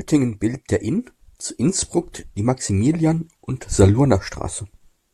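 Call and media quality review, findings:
No faults found in this speech recording: no dropouts, clipping, distortion, noise bursts or timing discontinuities detected anywhere in the audio.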